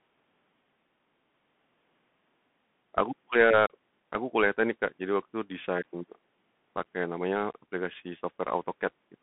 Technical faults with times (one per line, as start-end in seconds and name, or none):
0.00-9.22 Bluetooth CVSD headset codec